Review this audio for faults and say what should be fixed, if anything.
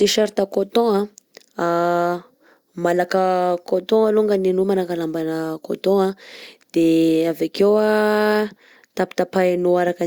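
No faults; nothing to fix.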